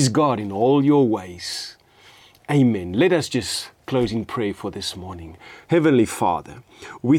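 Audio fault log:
No faults detected in this speech recording.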